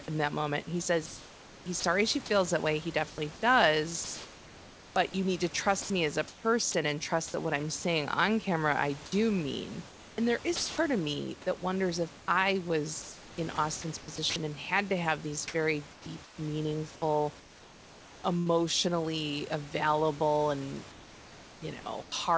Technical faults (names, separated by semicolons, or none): sound chopped by the voice detector; sound dropped by the voice detector; comfort noise in place of the background